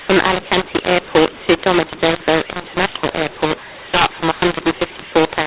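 A mu-law and A-law mix-up runs through the whole of this speech clip: telephone audio written as A-law G.711 is read back as mu-law, so levels are scrambled. The result is harsh, distorted speech with noise-filled pauses, all within a 4 kHz band that fits 8 kHz telephone coding.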